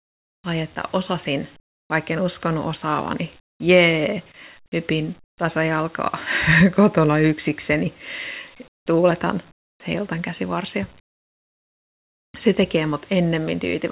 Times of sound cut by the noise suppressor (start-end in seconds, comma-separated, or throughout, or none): none